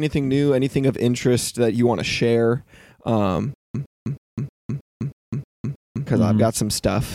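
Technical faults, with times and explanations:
3.54–6.07 s, stutter with silent gaps: a burst of about 114 ms repeats 8 times, each followed by about 202 ms of silence, so the pattern recurs every 316 ms at an even pace. The likely cause is a playback or stream stall. Each retry replayed the last buffered fragment and then ran dry, which gives the mechanical repetition with dead air between. The audio that should have filled this span never plays and is lost.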